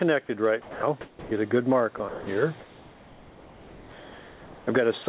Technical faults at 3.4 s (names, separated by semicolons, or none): comfort noise in place of the background